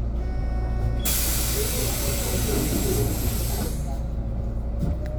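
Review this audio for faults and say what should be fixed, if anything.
Three short faults break into the sound, at 0.38 to 0.44 s, 2.56 to 2.60 s and 4.88 to 4.93 s, each brief, lasting roughly 40 to 60 ms. This is damaged data in a compressed stream: bytes in the encoded file were lost, zeroed or overwritten at those points, so the decoder misread the affected frames, lost sync and produced garbage until it found the next valid frame header. To prevent it, transfer and store the compressed file with checksums or error-checked transport, and re-fetch or re-encode any copy that fails verification.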